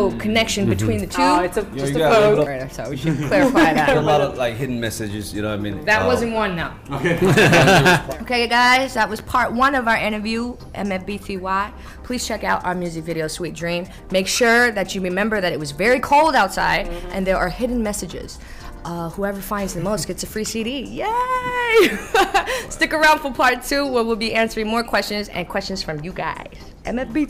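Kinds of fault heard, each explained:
Hard clipping: the signal reached a stage at about 12 dB more level than it could pass, so every peak that exceeded the limit was sliced off flat instead of following its natural curve. Only a small share of the waveform, around two percent, is pushed past the ceiling, but those squared-off tops add harmonics high in the spectrum, and they are heard as crackle on the louder moments of the sound.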